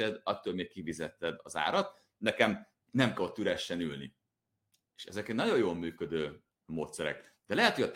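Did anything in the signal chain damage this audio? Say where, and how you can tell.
Yes: dropped samples at 5.04 s, a single sharp click just before "ezek egy nagyon jól", likely a driver or buffer glitch skipping about one sample so the waveform jumps.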